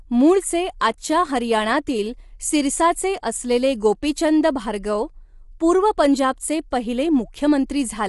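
From the start and throughout, the speech has the rough, grainy texture of low-delay AAC compression, likely AAC-ELD at a bitrate around 32 kbps. Coarse quantisation at the low bitrate leaves noise between the pitch harmonics, and nothing is present above 11.6 kHz.

Pre-echo appears at 0.80 s, just before "आजच्या हरियाणातील सिरसाचे असलेले", and again at 6.71 s, just after "गोपीचंद भार्गव पूर्व पंजाबचे". In each case a sharp attack landed late in a block. The codec spread that block's quantisation noise evenly across it, so a brief hiss of 12 to 14 ms precedes the attack, which sounds smeared.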